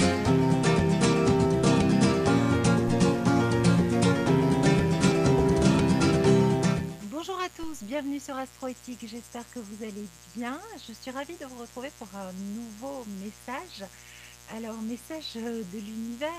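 A raspy mains buzz runs through the whole clip, sitting around 30 dB below the sound. Switching spikes at twice the 60 Hz mains rate spread harmonics upward, drawn on a spectrogram as evenly spaced horizontal lines climbing into the kilohertz range.

At 2.88 s a DC step jumps the waveform's zero line, and the offset then eases back over the following fraction of a second, as a 2 Hz high-pass would pull it. It lands as a low thump, seen as a sudden baseline shift with a slow curved return.

At 5.08 s a brief skip marks audio missing between chunks. The likely cause is a recorder working in 6-second blocks dropping a sliver, here a short fraction of a second, at each handover. The waveform shows an abrupt discontinuity with no gap.

A second DC step at 7.63 s repeats the thump, baseline jump and gradual settling.

At 11.06 s, six seconds after the first, the same chunk-boundary skip recurs, a hard splice visible as a vertical seam on the spectrogram.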